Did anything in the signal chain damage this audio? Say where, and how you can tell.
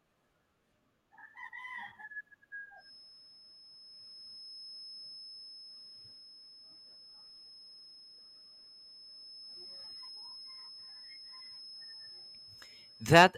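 Yes. A feedback whistle, a thin steady tone at 5.2 kHz, sits well below the speech from 2.75 s to the end, swelling and fading slowly in level. It is likely a loudspeaker-to-microphone loop held just short of runaway. Unlike mains hum, it is a single high pitch without harmonics.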